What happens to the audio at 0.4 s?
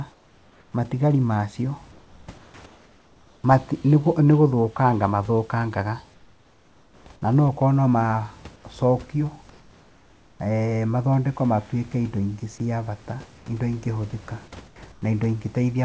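From 0.12 to 0.74 s, just before "matigari macio", the room background gives way to a steady, featureless hiss about 4 dB quieter, likely comfort noise in place of the background synthesised by the receiver during a pause. A spectrogram shows smooth, uniform texture; the waveform shows an even, lower noise floor.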